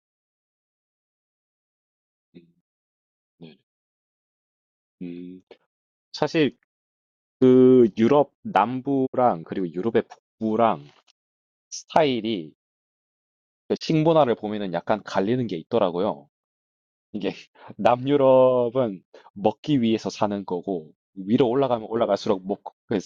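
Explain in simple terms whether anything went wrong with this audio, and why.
Two short gaps in the speech point to a digital broadcast dropout. The receiver briefly lost good data and muted, fading out quickly each time, around 9.05 to 9.16 s and again 13.76 to 13.83 s. Whatever was said in those moments is gone.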